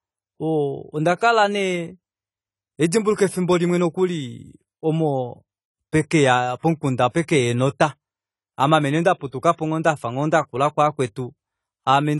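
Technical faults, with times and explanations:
Throughout, low-bitrate audio saved at a high bitrate: the speech has no content above 11.5 kHz, and its upper range sounds dull. The file is likely a low-bitrate AAC encode, consistent with about 32 kbit/s, re-saved as high-bitrate MP3, so the second encoding cannot restore what the first discarded. On a spectrogram, a hard flat ceiling sits at 11.5 kHz.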